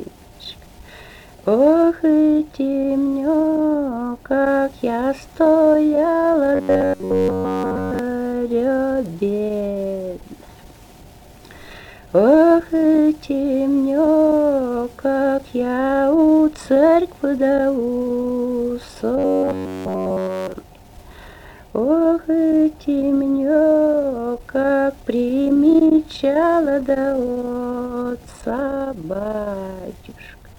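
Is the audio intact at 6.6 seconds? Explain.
No. From 6.55 to 7.99 s there is robotic sound from repeated short buffers: the sound is essentially all replaced by a rigid metallic buzz at 93.8 Hz, likely from one roughly 10.7 ms buffer looping while new audio is skipped. A waveform shows identical repeating cycles; a spectrogram shows flat harmonic lines spaced 93.8 Hz apart.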